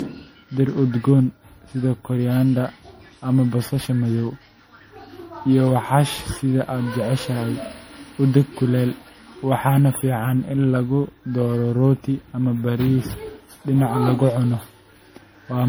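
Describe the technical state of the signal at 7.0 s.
At 7.0 s the speech carries generation loss, present across the whole clip rather than at this moment alone. It sounds swirly and hollow, with smeared consonant attacks and a watery, unstable high end, more degraded than one low-bitrate pass would give. The likely cause is repeated lossy re-encoding, around seven passes through a chain that fits 64 kbit/s MP3, each quantising on a shifted frame grid so that noise and spectral holes build up.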